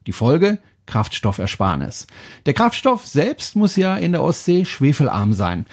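Nothing here trips any alarms: the speech comes through the call's microphone processing and codec as you'd expect, with the top end stopping around 8 kHz, which is simply the call's normal bandwidth.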